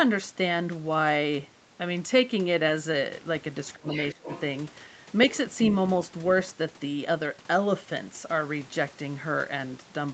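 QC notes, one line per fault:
3.75–3.87 s and 4.13–4.29 s, speech suppressed in double talk: the speech dips sharply, by about 25 dB in the first stretch and about 15 dB in the second. The likely cause is an echo canceller that could not separate the talker from the far end's echo and turned both down.
3.89–4.07 s, 4.26–4.41 s and 5.35–5.75 s, other side's voice leaking through: a second, fainter voice sits behind the speech, about 15 dB below it in the first two spots and about 20 dB below in the last. This is likely loudspeaker echo that escaped cancellation.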